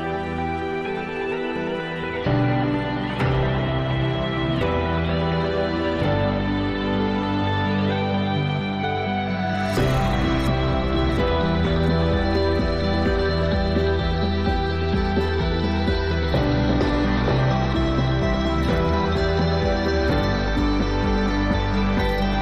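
No technical faults can be heard anywhere in this recording.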